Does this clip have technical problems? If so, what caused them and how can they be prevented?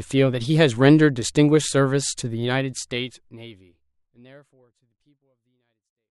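No, nothing here needs fixing or preventing; the speech simply fades out smoothly from around 2.5 s to the end, as an editor would intend.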